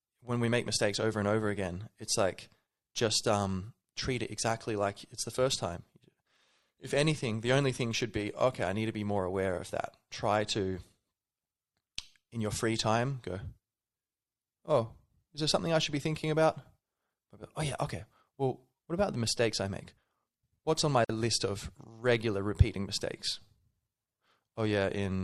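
At 21.05 s, right after "on my", the speech drops out for about 50 ms before resuming with "list of regular repeating" at 21.09 s. This is a gap at a join of encoded pieces: two separately encoded segments were butted together without trimming the encoder's start-up delay and end padding, leaving silence mid-phrase. On a waveform it shows as a flat stretch with abrupt, slightly smeared edges. On a spectrogram it's a clean vertical blank band across all frequencies.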